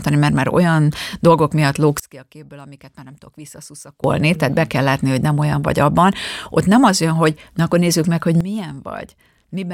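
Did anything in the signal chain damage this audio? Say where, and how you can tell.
Yes. The speech contains two sudden gain jumps. At 2.00 s, right after "már olyan dolgok miatt", the level drops by about 22 dB in a single step and returns at 4.04 s, just before "tehát be kell látni". At 8.41 s, after "akkor nézzük meg hogy", it drops by about 13 dB and stays down to the end. The speech and the background noise fall together with no fade, which likely points to a digital gain setting applied without a ramp in the driver or processing stage.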